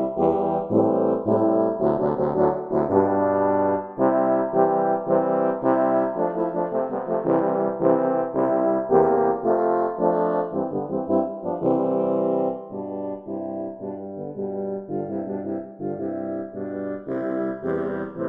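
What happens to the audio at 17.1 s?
Channels drifting apart, present throughout: clocks roughly 50 ppm off have slid the channels about 0.7 ms apart, heard as slow flanging and seen as sweeping spectrogram notches.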